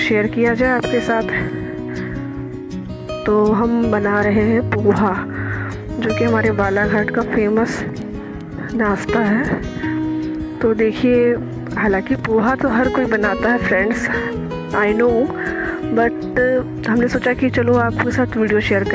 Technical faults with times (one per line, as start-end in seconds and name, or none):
none